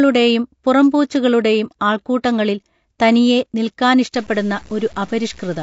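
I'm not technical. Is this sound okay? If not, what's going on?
No. Throughout the clip the speech sounds rough and grainy, with a hiss between the voiced tones and a thin, artificial-sounding top end. That is most likely low-delay AAC compression, the kind used on video calls. Unlike ordinary background hiss, this graininess clings to the voice itself.

From 4.15 s to the end, a second grit appears that rises and falls with the sound and turns quiet sounds gritty. This is low bit depth without dither, likely from audio stored with very few steps of loudness, about seven bits' worth, and crudely chopped.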